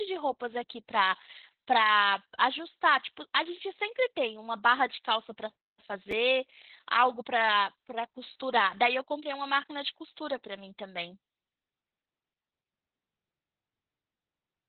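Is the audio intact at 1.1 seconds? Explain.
No. At 1.1 seconds, as throughout, the speech sounds muffled, hoarse and faintly robotic from Opus voice compression: heavy, narrowband SILK coding with nothing above 4.3 kHz, consistent with about 8 kbps.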